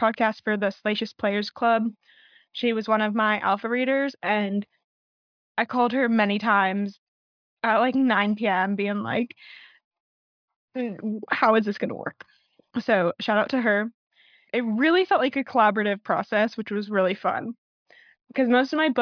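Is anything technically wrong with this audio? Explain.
No, nothing is technically wrong with this audio.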